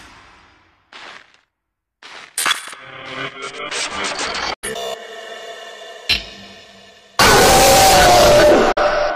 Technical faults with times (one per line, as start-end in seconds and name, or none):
4.54-4.68 digital broadcast dropout
8.72-8.81 digital broadcast dropout